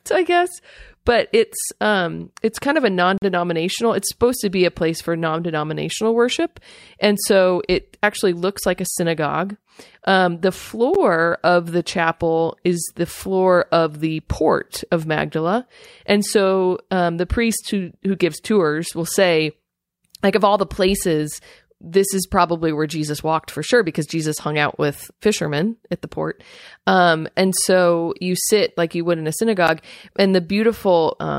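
Speech, broken three times by a block of digital silence: a 43 ms hole from 3.18 to 3.22 s, and two 11 ms dropouts at 10.94 s and 29.68 s. Each starts and stops abruptly, so the longer gap sounds like a brief hole and the short ones like ticks. The lengths fit 2048- and 512-sample buffers at 48 kHz left unfilled in time. A waveform shows flat, near-silent stretches, and a spectrogram shows blank vertical strips.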